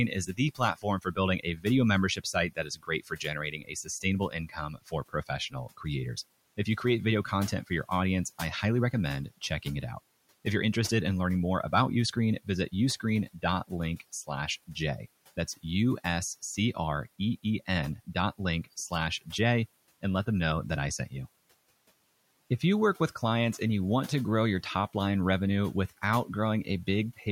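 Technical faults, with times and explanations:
0.15–1.66 s, 2.16–5.85 s and 13.0–14.29 s: speech cut by the noise suppressor. The suppressor took parts of the speech for the room noise, about 26 dB below, and turned them down by up to about 16, 19 and 14 dB. Soft sounds go faint or swallowed, for roughly half a second, a second and a half, and 150 ms.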